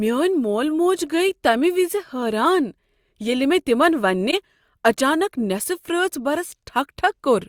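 At 4.30 to 4.34 s the speech is briefly disrupted for about 35 ms. This is a corrupt frame concealed: the decoder detected damaged data, likely in a single AAC frame, and replaced it instead of playing it.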